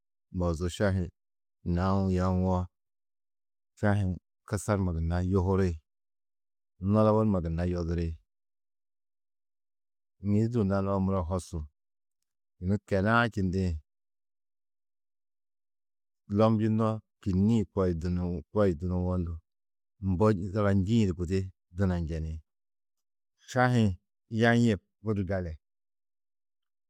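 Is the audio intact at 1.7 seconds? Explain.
Yes, the audio is intact at 1.7 seconds, with no audible fault at that moment.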